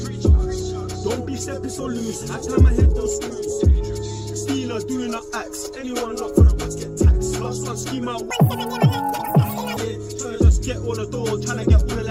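From 8.31 to 9.77 s the sound suddenly races forward at twice its normal speed and jumps a full octave higher, 12 semitones up, before returning to its proper rate. This is audio read two samples at a time (double speed): the reader has treated each pair of consecutive samples as a single frame, as though the data held two channels or samples twice as wide. Each output frame then uses two source samples, halving duration and doubling every frequency.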